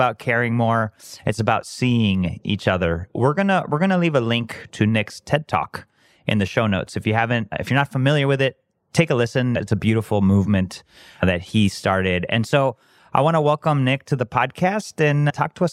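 A drift correction step occurs from 2.84 to 3.35 s, just after "it's about seeing each", and again from 12.36 to 12.99 s, after "movement that he started". In the first, the speech slows by 5.8% and drops about a semitone (-104 cents). In the second, it speeds up by 5.8% and rises about a semitone (+98 cents). Both then snap back to normal. This is likely clock-matching software abruptly changing the playback rate to drain or refill its buffer.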